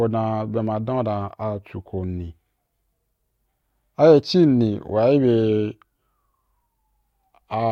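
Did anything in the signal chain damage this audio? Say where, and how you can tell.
No, nothing in this speech recording stood out on listening as a sign of damage anywhere along the signal chain.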